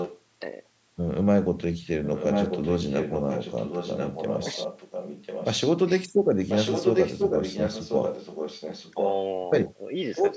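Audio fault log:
0.00–0.21 s, 2.03–5.69 s, 6.49–9.09 s, echo leak: a second copy of the speech trails the original by about 1.04 s, only a few dB quieter, which is likely from a far-end loudspeaker whose echo canceller let it through. The spectrogram shows the same harmonic patterns repeated one second later, and the waveform shows fewer gaps between phrases.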